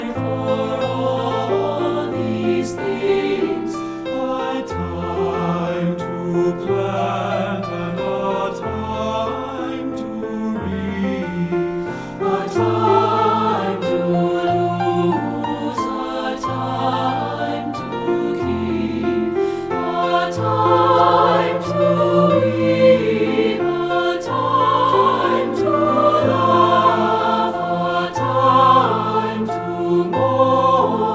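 No technical faults can be heard anywhere in this audio.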